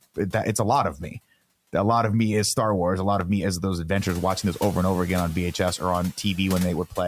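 Right after "it that it's", at 0.59 s, a click begins. It returns every 0.87 s until 6.70 s. These are clock drift buffer slips. Two clocks likely disagree by about 700 parts per million. The buffer drifts until a few tens of samples are dropped or repeated. Each slip is a brief tick in the speech. The room noise rising near 4 s stays well below the speech.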